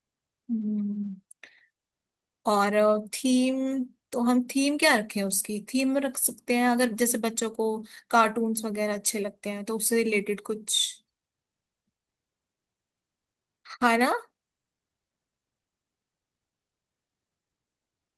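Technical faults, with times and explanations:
No technical faults can be heard anywhere in this speech recording.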